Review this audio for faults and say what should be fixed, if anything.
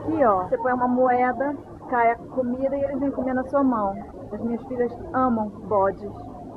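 Nothing here needs fixing; the audio holds together well throughout, so you can leave it as it is.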